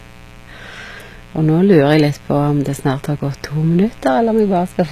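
Mains buzz runs through the whole speech recording as a raspy 60 Hz buzz about 25 dB below the voice, caused by sharp switching spikes twice per mains cycle that spread harmonics up into the kilohertz range. HE-AAC compression is also present throughout: the s sounds turn gritty and metallic, nothing reaches above 14.9 kHz, and the treble is likely rebuilt from copied lower bands at a bitrate near 20 kbps.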